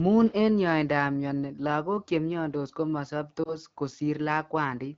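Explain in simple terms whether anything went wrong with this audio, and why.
Something did go wrong, briefly, at about 3.44 s. The speech gives a short dip and warble lasting until about 3.57 s, which fits a single lost AMR speech frame. A radio error spoiled one small slice of the call, so the phone's decoder guessed it by reusing the previous sound at lower volume, then recovered a touch rough. Unlike a true dropout or click, there's no hard silence or sharp tick, just a smeared wobble in the otherwise clear HD Voice sound.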